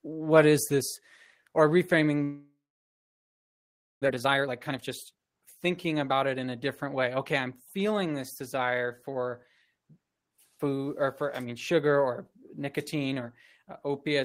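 A long network dropout runs from 2.23 to 4.08 s, right after "is this or reframing". The last sound is stretched into a fading buzz and then near-silence for about 1.5 s, likely because packets stopped arriving. About 1 s of speech never returns.

A jitter buffer speed-up follows from 4.09 to 8.42 s. Delayed audio piled up in the buffer, so the receiver repeatedly cut out short pitch-period pieces, roughly 0.7 s in total. Speech runs at 118 % speed at unchanged pitch and sounds hurried.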